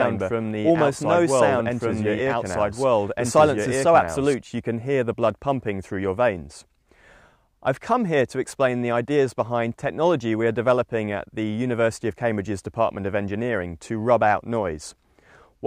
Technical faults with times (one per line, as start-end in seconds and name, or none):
0.00-4.34 doubled audio track